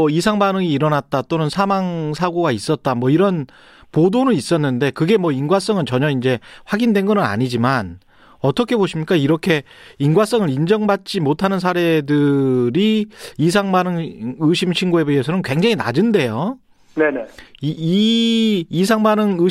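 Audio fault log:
Throughout, resampler restarted on every block: each 40 ms chunk gets converted on its own, so every edge glitches, leaving regular ticks at 25 Hz under the speech.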